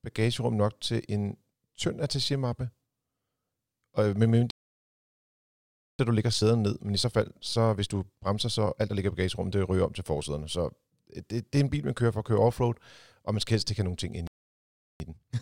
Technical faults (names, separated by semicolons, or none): playback stall; time-compressed catch-up